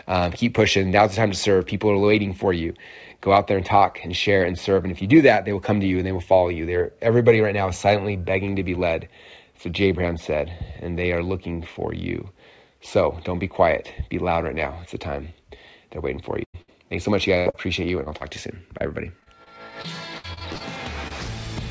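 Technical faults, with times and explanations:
16.44 to 16.56 s and 16.62 to 16.70 s, burst of packet loss: two close dropouts of about 100 ms and 60 ms, each bridged by extending the preceding sound and fading it. A held buzz or hiss replaces the missing audio, and the sound resumes further on. On a spectrogram, each appears as smeared, frozen harmonics that dim before an abrupt restart.
17.38 to 21.12 s, repeated packet loss (robotic sound): fifteen short holes, the longest about 82 ms and together about 12% of the span, are each patched by continuing the last sound. This makes the passage choppy with pieces missing. A spectrogram shows repeated stretched, frozen slices and sudden joins, all below the 8 kHz ceiling of the call codec, which fits G.722.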